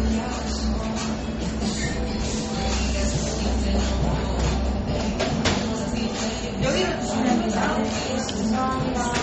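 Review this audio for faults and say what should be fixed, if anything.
Throughout the clip, the sound is dull and plainly damaged. Nothing is heard above 8.3 kHz. This is likely MP3 compression. The encoder ran short of bits and cut the treble at a fixed point. It also dropped weak frequency content, which flickers in and out from frame to frame. The result is a smeared, watery texture. The damage fits a very low bitrate, around 32 kbps. To prevent it, keep an uncompressed or high-bitrate original and encode at a much higher bitrate.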